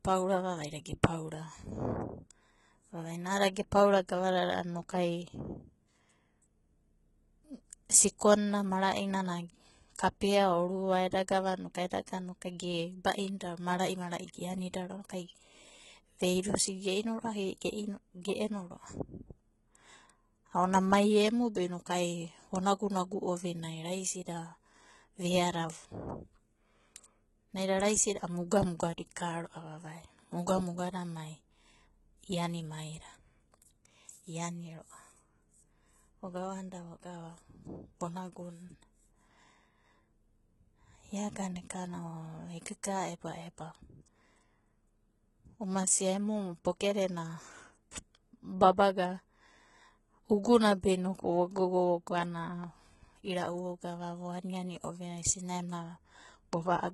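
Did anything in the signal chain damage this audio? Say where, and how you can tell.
Yes: the damage happens at the codec stage, likely HE-AAC compression at a very low rate, something around 16 kbps. Throughout the speech, nothing comes through above 11.8 kHz, and the treble it does carry is rebuilt from copied lower bands, so s sounds turn gritty, metallic or lispy.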